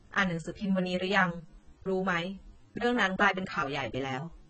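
Speech, heavily degraded throughout by what is likely AAC compression. Nothing sounds above about 8.6 kHz. The dull, smeared, warbling texture fits a very low bitrate, around 16 kbps.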